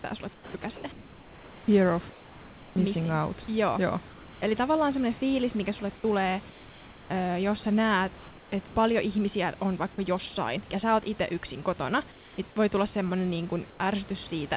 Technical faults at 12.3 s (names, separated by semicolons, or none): comfort noise in place of the background